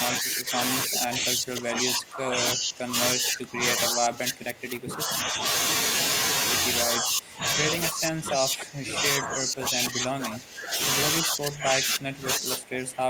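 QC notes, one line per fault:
0.19–0.58 s, 0.86–2.96 s, 3.13–5.43 s, 6.84–7.67 s, 7.91–10.78 s and 11.23 s to the end: speech suppressed in double talk. The speech is repeatedly pulled down, by about 10 dB in the first stretch and about 20 to 25 dB in the rest, thinning and breaking into pieces. The likely cause is an echo canceller treating simultaneous far-end talk as echo and attenuating everything. The waveform shows shrunken, ragged envelopes; the spectrogram shows faded harmonics and missing upper bands in those spans.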